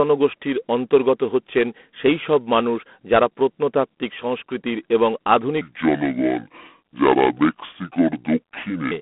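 From the start the whole clip carries G.726 ADPCM damage: nothing gets through above 3.8 kHz, the line band sits around 200 Hz to 3.4 kHz, and a harsh, rasping hiss rides the speech's level, which fits the coarse 24 kbit/s mode.

Then, right after "প্রত্নতাত্ত্বিক সংস্কৃতির এবং আধুনিক", from 5.61 to 8.91 s, there's a section at the wrong speed: it runs at 0.64 times normal, so it drags slow and drops roughly seven semitones deep, likely from playback against the wrong clock.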